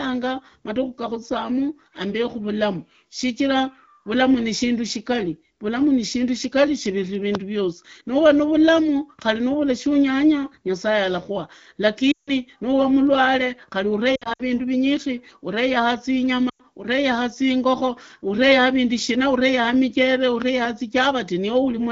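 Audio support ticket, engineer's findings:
Loud pop at 7.35 s, between "shigari vulamu shigali shipiri" and "vyosi nuva navulamu khari". A single sharp click roughly 15 dB above the sound, which carries on underneath. A second loud pop at 20.42–20.67 s is a double thump. The likely cause is a voltage transient, from a plug, switch, static or driver glitch, added into the signal path.

Lost AMR speech frames. At 12.11–12.31 s the sound drops to near silence for about 160 ms before "nuvaa mundu", which fits eight consecutive 20 ms frames. At 14.15–14.42 s there are scattered dips and warble over 240 ms, with the longest gap 60 ms, before "vindu vinyikhi". At 16.49–16.61 s the sound fades briefly, about 100 ms. In each case frames failed their checksum over the radio link, and the AMR-WB decoder at 12.65 kbit/s concealed them by repeating the last good parameters with decaying gain.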